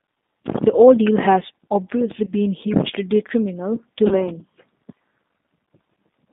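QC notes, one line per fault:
throughout: G.729 codec. The speech sits in a narrow line band of about 200 Hz to 3.7 kHz and is carried at 8 kbit/s, which points to the G.729A variant. The decoder rebuilds each 10 ms frame from a vocal tract filter, a pitch predictor and a sparse set of pulses, so the speech stays intelligible but has a plainly audible rough, synthetic edge, and everything above the band is missing.
2.25 to 2.32 s and 4.07 to 4.27 s: VoIP packet loss concealed by the speech codec. At the first, after "ordeal has obviously", about 20 ms of audio is lost, one packet's worth. At the second, after "hugely detrimental to", about 40 ms goes missing, which fits two packets. Each time the decoder extends its last pitch and filter with falling gain, so the sound smears into a brief buzzy tone or coloured noise that fades. Because every frame depends on the previous one, the speech stays weak or distorted beyond the gap itself, over roughly 70 ms and 200 ms respectively.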